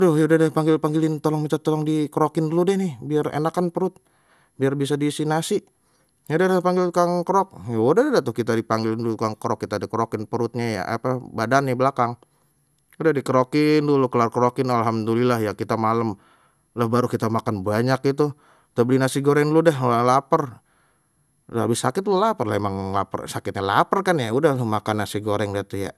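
Speech, carrying generation loss across the whole recording: it sounds swirly, hollow and smeared, with soft attacks and nothing above 12.6 kHz. Unlike a single low-bitrate encode, the damage exceeds what that bitrate alone would explain, likely from about four passes through something like MP2 at 128 kbit/s.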